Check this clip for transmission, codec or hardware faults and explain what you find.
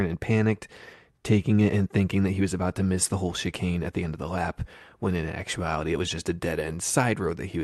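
No faults turn up anywhere in this speech recording.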